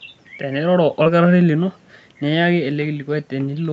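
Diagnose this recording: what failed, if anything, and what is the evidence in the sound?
The fault sits at the network stage: a short concealed packet loss at 1.03 to 1.07 s. About 20 ms of the speech never arrived at the decoder in time, so the receiver synthesised a stand-in by extending the preceding sound and then crossfaded back into real audio. The result is a brief smear or wobble rather than a hard gap, and any very short consonant at that point can disappear. The codec's band limit at about 8 kHz holds throughout.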